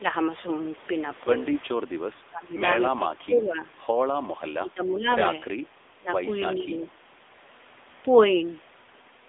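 Across the whole clip the speech carries the sound of the AMR narrowband mobile codec. Nothing above 3.8 kHz survives, and the usable band sits between roughly 300 Hz and 3.6 kHz, giving the thin telephone quality. The codec rebuilds the voice from a vocal-tract model excited by sparse pulses, and here the damage is plainly audible. The speech has a buzzy, synthetic edge that fits a mid-rate AMR-NB mode, around 8 kbps.

Three level dips break the speech, likely caused by speech suppressed in double talk, where an echo canceller unable to separate the near talker from loudspeaker echo turns everything down. The first runs from 2.29 to 2.63 s and falls about 15 dB for around a third of a second. The second, from 4.39 to 5.07 s, is the longest, also about 15 dB down for roughly half a second. The last, at 5.98 to 6.09 s, is brief but deepest, about 20 dB.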